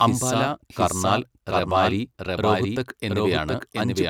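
From start to finish, every phrase of the speech is heard twice: a second, equally loud copy trails the first by roughly 0.7 seconds, so the two layers overlap and smear into each other. The trailing copy carries the full frequency range with no reverberant tail or room colour, which marks it as a doubled audio track rather than an echo. The likely cause is the same signal reaching the mix a second time through a slower path.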